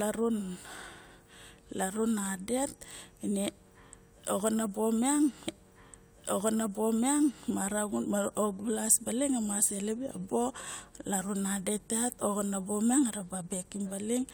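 From 5.47 s to 7.48 s, about 2.0 s of speech plays again after a small blip: a stream segment repeated, the player queuing the same segment twice.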